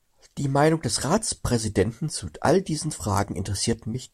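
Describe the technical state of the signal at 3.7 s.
At 3.7 s the speech signal is intact, with no dropout, clipping, glitch or other fault audible at that moment.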